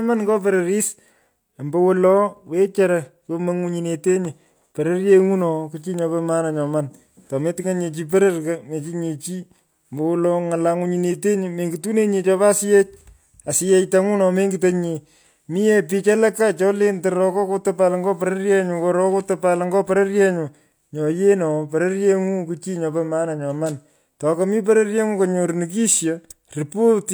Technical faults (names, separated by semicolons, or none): none